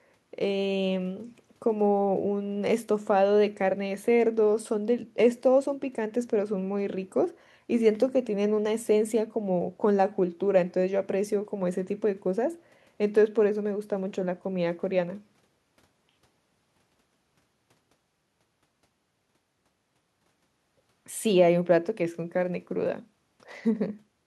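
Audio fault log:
No audible faults detected.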